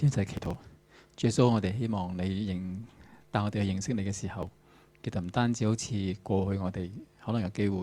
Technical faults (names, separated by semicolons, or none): processor overload crackle